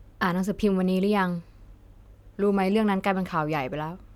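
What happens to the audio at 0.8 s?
Nothing goes wrong at 0.8 s; the speech there is intact, with no dropout, click, distortion or other fault at that moment.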